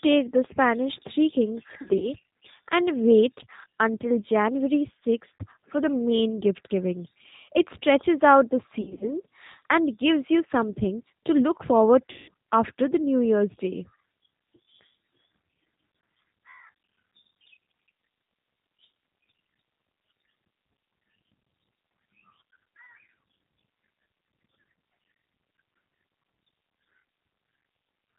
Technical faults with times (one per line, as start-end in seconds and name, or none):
0.00-28.18 G.729 codec
1.82-2.13 VoIP packet loss concealed by the speech codec
5.38-5.44 VoIP packet loss concealed by the speech codec
8.81-9.13 VoIP packet loss concealed by the speech codec
12.12-12.30 VoIP packet loss concealed by the speech codec